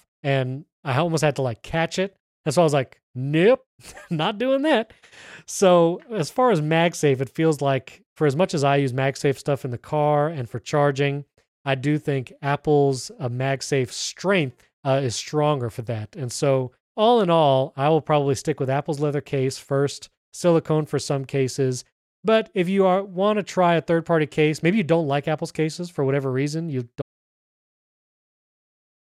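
At 27.02 s the speech cuts off mid-flow and the audio drops out to silence through to the end of the clip. The gap is dead silence with no room tone, likely from the input being lost while recording continued writing silence.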